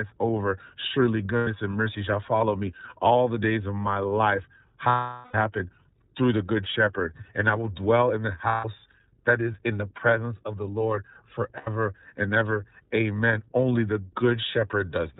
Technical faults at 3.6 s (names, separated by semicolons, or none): iLBC codec